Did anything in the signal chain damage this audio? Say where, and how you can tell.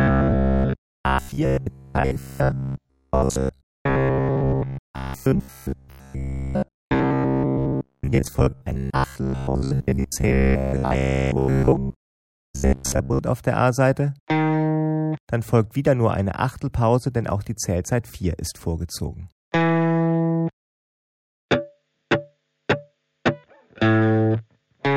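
Yes: robotic sound from repeated short buffers, 0.02 to 13.19 s, with a rigid 66.7 Hz buzz and most of the audio replaced by repeats, likely from buffer underruns recycling 15 ms chunks.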